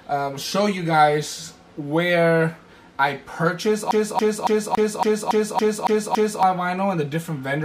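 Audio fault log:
3.91–6.43 s, CD stuck on one turn: the same 0.28 s fragment repeats nine times in a fast, even stutter, with a brief mute at each jump. A scratch keeps knocking the laser back one track at the identical point of every rotation.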